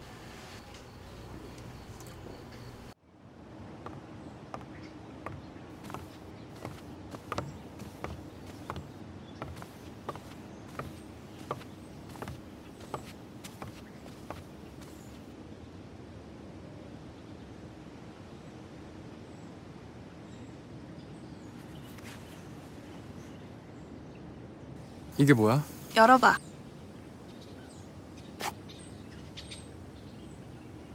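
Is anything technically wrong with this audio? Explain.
Yes. From 24.76 s to the end at 30.95 s, pre-emphasis is left on. The treble lift applied before recording or transmission, matching a 50 µs FM curve, was never undone by the corresponding de-emphasis cut on playback. High frequencies stand about 10 dB too strong at 10 kHz relative to 1 kHz, so this final section sounds thin, overly bright and sharply sibilant.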